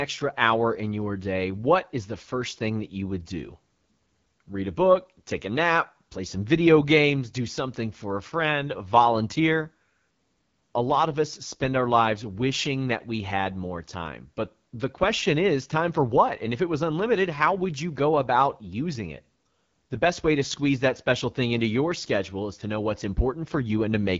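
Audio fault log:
Throughout: AMR wideband (HD Voice) codec damage. The speech has a rough, raspy edge with a hiss-like top band and nothing above 7.5 kHz, which fits one of its lowest rates, near 8.85 kbit/s. A plain low-pass filter would stay clean, and narrowband AMR cuts far lower.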